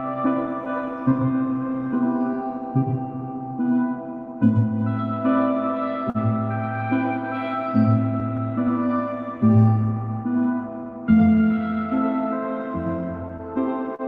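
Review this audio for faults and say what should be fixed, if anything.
Clock drift between sender and receiver runs through the whole recording. The sending clock runs roughly 3 percent slow, so the receiving buffer keeps draining and the playback side has to pad it out to stay in step. Unlike a single network stall, the timing unsteadiness is spread across the entire clip rather than tied to one moment, and it never fades out as a burst of late packets would. Locking the receiver to the sender's clock or resampling adaptively to match its rate would prevent it.

Repeated timing corrections appear from 0.02 s to 11.43 s. The receiver repeatedly repeats short pieces to compensate for the slow sender, and the effect is equivalent to playing at about 98 percent speed. Altogether it adds roughly a third of a second. Every edit goes the same way, lengthening rather than cutting, and each is tiny, so the result is a slightly dragging, uneven tempo rather than distinct dropouts or held sounds. 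Smoother, continuous rate adjustment in place of discrete repeats would keep the tempo even.

A short stall from a late packet occurs at 6.10 to 6.18 s. A packet missed its deadline, the jitter buffer ran dry, and the receiver held the last sound for 46 ms until the packet arrived. Playback then resumed from the same point, so nothing is lost but the delay grows by that amount. The single held moment distinguishes it from the ongoing stretching of the timing corrections. A slightly deeper jitter buffer would absorb a delay of this size.

Repeated stalls (stutter) come in from 13.28 to 14.02 s. The buffer emptied three times, and the receiver extended the preceding sound each time, filling 64 ms in total with the longest gap at 41 ms. That concealment covers about 9 percent of this stretch. Nothing is missing, yet the sound catches and drags in quick succession. These gaps are clustered and audible, unlike the single isolated stall at 6.1 s or the almost imperceptible drift corrections. 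An adaptive buffer that grows when arrivals slow would prevent the stutter.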